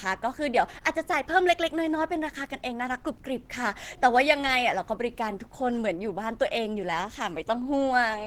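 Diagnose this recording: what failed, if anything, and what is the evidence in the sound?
The fault sits at the codec stage and runs through the whole clip. The speech has a hoarse, muffled quality, with grainy, noise-like texture where finer spectral detail should be. This is likely Opus compression at a low rate, around 16 kbps, in its hybrid speech mode. The encoder keeps the overall band energies and fills the detail it cannot afford with folded or synthetic content. The high band is still present, but it sounds rough rather than clean.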